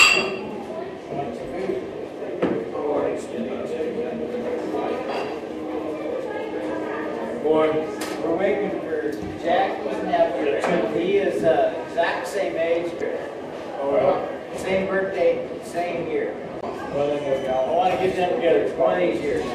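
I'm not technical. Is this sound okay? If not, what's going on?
No, there are two brief glitches, at about 12.97 s and 16.60 s, each a split-second blip caused by damaged data in a compressed stream, where the player briefly stumbled over corrupted bits of the file.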